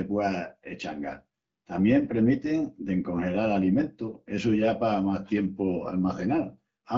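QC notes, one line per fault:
The speech is carried by the AMR wideband (HD Voice) codec at 12.65 kbit/s, which fits the clear, lightly coded sound heard here, with the band above 6.4 kHz filled in by shaped noise up to 7 kHz.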